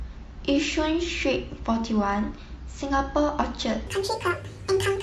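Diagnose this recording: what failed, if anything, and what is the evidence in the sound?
Throughout, the speech sounds rough and grainy, with noise filling the gaps between harmonics and a thin, synthetic top band. This is codec-stage damage, likely low-delay AAC compression, whose short frames resolve pitch poorly; the grain fits a bitrate around 32 kbps. Unlike packet loss, the roughness is steady, with no dropouts.

From 3.87 s to the end, the audio runs 1.68 times too fast, so the speech turns hurried and jumps up by roughly ten semitones. This is a section at the wrong speed, likely an editing or playback clock mismatch. A pitch-shift effect would keep the timing, but here tempo and pitch rise together.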